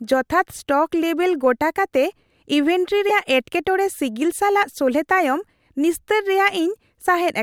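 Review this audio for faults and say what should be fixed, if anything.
From 3.09 to 3.11 s, just before "ᱮᱴᱠᱮᱴᱚᱬᱮ ᱥᱤᱜᱤᱞ", the speech glitches and jumps ahead. This is likely a broken MP3 bit reservoir: after cut frames, the next frame decodes borrowed bytes from the wrong frame. The glitch's length fits one or two 24 ms frames. To prevent it, edit or splice on decoded audio or on frame boundaries that respect the reservoir, and never drop MP3 frames from the bitstream.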